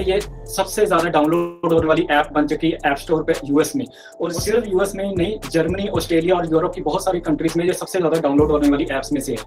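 From 1.35 to 1.64 s there is a call audio freeze. Incoming packets were most likely held up in transit, so the jitter buffer ran dry and the receiver had to invent sound to cover the hole. It stretched the last sound it had into a fading buzz-like tail lasting about 0.28 s, with no true silence. When the packets arrived, playback resumed exactly where it had stopped. Nothing is lost, but a pause that never existed has been inserted.

At 1.84 s comes a skip ahead. A short run of audio, around 70 ms, was discarded, either lost in transit or thrown out by the jitter buffer while later material was already queued behind it. Playback jumps forward almost seamlessly, bridged by only a few milliseconds of fill. The ear hears the two sides spliced together, with a small piece of sound simply absent and a slightly abrupt join.

From 2.16 to 3.18 s the jitter buffer slow-down begins. The buffer was running short of reserve, so the receiver repeatedly duplicated single pitch periods and slivers of pauses to build it back up, adding 64 ms over that second. 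Playback runs at 94% speed with pitch unchanged. The effect is a subtle drawl, with sounds held a little longer than natural, and the repeated cycles can leave a faint warble.

From 7.28 s to 9.43 s, near the end, there is a jitter buffer speed-up. The buffer had overfilled, as when a burst of delayed packets lands at once, and to trim the excess latency the receiver cut out short pieces of one or a few pitch periods again and again, roughly a fifth of a second in total. Playback runs at 111% speed with the same pitch, so this closing stretch sounds hurried and compressed in time.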